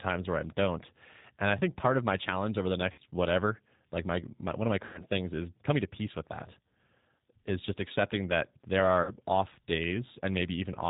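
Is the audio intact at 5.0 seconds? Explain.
No. From 4.85 to 5.02 s, between "my one of my" and "things is coming to", the speech shows VoIP packet loss concealed by the speech codec. About 90 ms of audio never arrived, which fits three lost packets. The decoder filled the gap by repeating its last pitch and vocal tract filter at falling gain. The result is stretched sound, a buzzy tone or coloured noise that fades, and the speech stays weak and smeared for a short while after real packets resume, because each frame builds on the one before. A plain dropout would instead give silence or a click with an instant clean recovery.

Under this, and across the whole clip, the G.729 codec is plainly audible. Nothing above 4 kHz passes, and the speech has the rough, slightly synthetic texture of a model rebuilt from a filter, a pitch predictor and a few pulses per frame, which points to a bitrate near 8 kbit/s. 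A simple low-pass filter would cut the top just as hard but leave the sound smooth rather than rough.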